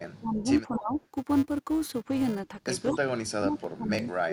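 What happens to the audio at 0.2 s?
At 0.2 s the speech is inside a stretch of speech suppressed in double talk, running from 0.17 to 0.99 s. The level sags by up to roughly 20 dB over about 0.7 s in total, likely because an echo canceller ducked this talker while the far side spoke. The loss is of the direct voice itself, not an added copy.

Just before, from 0.12 to 0.18 s, there is an echo leak: a faint delayed copy arriving 229 ms late, about 35 dB down. Its likely cause is incomplete echo cancellation. Unlike the suppression, it adds sound rather than removing it.

Underneath both, a filter restarted on every block gives a steady 375 Hz buzz. That rate fits a 128-sample block, and the buzz rises and falls with the signal's level rather than with the far side's talking.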